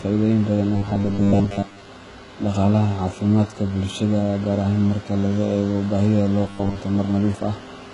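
HE-AAC compression affects the whole clip. Nothing is present above 11 kHz, and the treble below that is likely rebuilt from copied lower bands with misaligned harmonics. The s sounds turn gritty and lispy, with heavy damage that fits a bitrate near 12 kbps.

Robotic sound from repeated short buffers occurs from 0.76 to 1.90 s and again from 6.44 to 6.79 s. New audio likely arrived too seldom, so a 10 ms slice was replayed over and over while most of the real audio was skipped. This forces a rigid, metallic 100 Hz buzz onto the speech.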